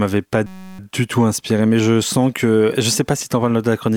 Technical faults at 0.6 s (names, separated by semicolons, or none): system hang loop